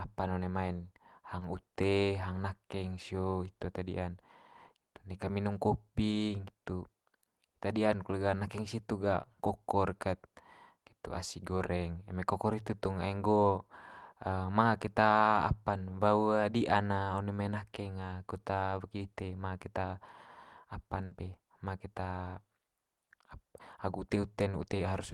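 At 1.39 to 1.43 s there is a short concealed packet loss: about 20 ms of the speech stream failed to reach the decoder in time, so the receiver bridged the hole by extending the sound just before it and then blending back into the real signal. The result is a brief smear or wobble lasting only a few hundredths of a second, during which the actual sound of that moment is simply absent.

From 21.05 to 21.13 s a burst of packet loss occurs. Roughly 60 ms of consecutive audio never arrived or arrived too late for playback, and the receiver filled the gap by continuing the last sound while fading it down. This produces a short sustained, decaying stretch in place of real speech, after which the audio picks up further along with that 60 ms of content gone.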